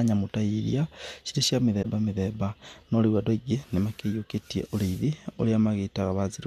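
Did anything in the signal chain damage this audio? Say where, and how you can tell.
Yes. At 1.82 to 1.86 s, a span of about 40 ms, the speech is damaged. That points to a single corrupt frame concealed by the AAC decoder, which muted or smeared it.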